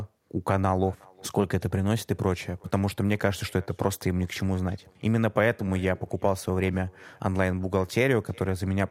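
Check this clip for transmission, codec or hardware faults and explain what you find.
One fault runs through the whole recording: echo with no canceller. At the far end the call plays on a loudspeaker, the microphone there picks it up, and nothing subtracts it, so the speech returns after the network round trip. Each phrase is trailed by a faint, thin copy about 28 dB down, arriving roughly 0.4 s later. Room reverberation would blur into the sound at once, but this is a distinct delayed repeat.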